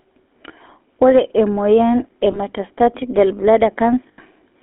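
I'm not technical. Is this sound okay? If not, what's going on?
No. GSM full-rate codec, throughout: the voice went through an old mobile-phone encoder that rebuilds it from a rough model, leaving it buzzy, gravelly and cut to a thin phone band.

Lost GSM frames, at 2.32–2.40 s and 4.09–4.19 s: chunks of the signal went missing, so the phone repeated the last good piece, causing brief metallic, ringing smears.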